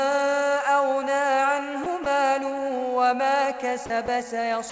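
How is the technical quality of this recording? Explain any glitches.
The recording has five short dropouts, each most likely sound dropped by the voice detector. It passed through a G.722 call path, which leaves nothing above 8 kHz.

The dropouts fall at 1.84–1.86 s, 2.04–2.06 s, 3.86–3.90 s, 4.06–4.08 s and 4.70 s, right at the end. Most last 20 ms and the third lasts 40 ms. The sender's detector judged the audio as background and briefly stopped transmitting, so the receiver substituted comfort noise. Each one is heard as a tiny gap where the sound gives way to steady noise or near silence, resuming afterwards except for the last, which runs to the end.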